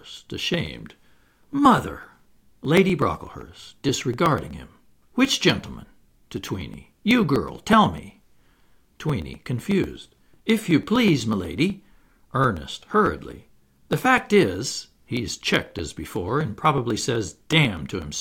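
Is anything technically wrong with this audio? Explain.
Yes. From 0.17 s to 18.15 s the speech has periodic USB or driver dropouts. Every 0.124 s, about eight times a second, something in the system stalls the USB bus or audio driver, and roughly a millisecond of audio is skipped rather than padded with silence. Each skip splices two mismatched points of the waveform together, so the speech carries around 150 evenly spaced ticks, a steady rapid clicking that is audible only while there is sound and drops out in the pauses.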